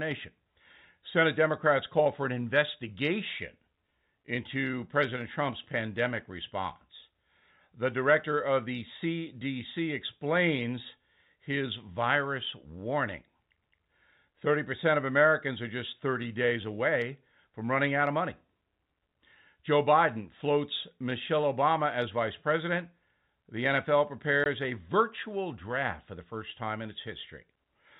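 At 24.44 s, just before "a virtual draft for", the speech is cut by a 20 ms hole of dead silence with hard edges. This is packet loss filled with silence, which fits a single lost packet whose gap the receiver left empty.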